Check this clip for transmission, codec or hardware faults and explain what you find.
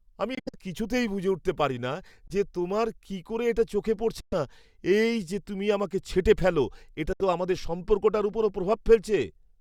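Four short holes in the speech, all of the same kind: a Bluetooth dropout at 0.35–0.56 s (broken gaps, longest about 70 ms), 2.28–2.32 s, 4.20–4.33 s and 7.13–7.21 s. The sound cuts to silence abruptly and resumes further along, as if it had kept playing. That fits packets likely arriving too late over the wireless link and being discarded.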